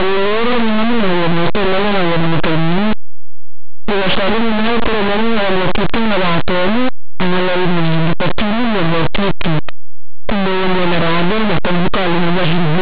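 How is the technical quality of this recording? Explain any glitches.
The technical quality is poor. The whole recording is buried in heavy, harsh distortion from start to finish.

Linear audio read as companded runs through the entire clip. The samples were stored as plain linear 8-bit values but decoded as mu-law. Under that mapping, quiet samples just on one side of zero become the loudest codes, while their neighbours across zero stay small. The speech turns into a rasping, very loud buzz even in pauses. On a waveform it looks like a lopsided block. A spectrogram shows broadband smear across the whole band.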